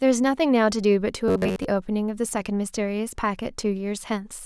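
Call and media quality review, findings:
Robotic sound from repeated short buffers, 1.28 to 1.66 s: speech collapses into a rigid metallic buzz near 94 Hz. Likely receive-side buffer underrun, with a roughly 11 ms slice looped over most of the interval. The fixed buzz pitch, not dropouts or clicks, marks it.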